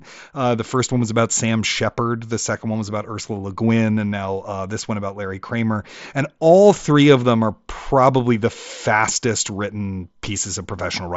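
No technical faults can be heard in this speech recording. It comes through a Bluetooth mSBC headset link, so the sound stops at about 8 kHz, with a light graininess on louder passages and faint upper bands that come and go.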